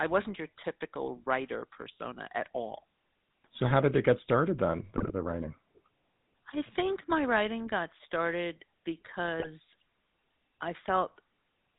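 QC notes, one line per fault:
Throughout: GSM full-rate codec. The speech has a buzzy, gravelly roughness, plainly audible. The decoder rebuilds the voice from a vocal-tract model fed by regular pulses, at 13 kbps, which fits this first GSM codec. Nothing above 4 kHz comes through, so the sound is dull.
4.96–5.12 s and 9.40–9.49 s: GSM bit errors. After "it get started then" and before "the writing", the speech breaks into squawks and gargling, and again briefly at 9.4 s. Corrupted filter, pitch or gain values bend the spectrum for a few frames.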